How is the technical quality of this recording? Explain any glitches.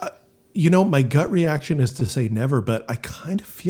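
The recording has one glitch. From 1.27 to 2.29 s, just after "you know my gut", there are repeated stalls (stutter). Packets arrived late, so the jitter buffer kept emptying. About ten brief gaps, each up to 14 ms, were filled by continuing the last sound. Nothing is lost, but the speech drags and stutters.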